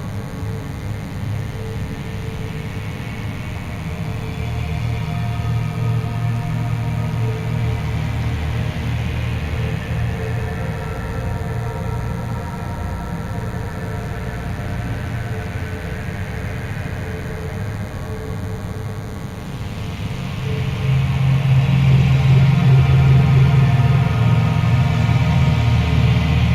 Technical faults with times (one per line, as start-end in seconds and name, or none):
0.00-26.55 DECT cordless phone buzz